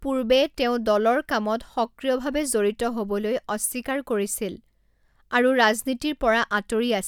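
No dropouts, clicks, distortion or level jumps turn up anywhere in the speech recording.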